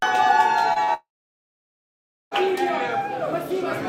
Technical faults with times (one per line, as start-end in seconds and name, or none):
0.73-0.90 short concealed packet loss
0.94-2.33 long network dropout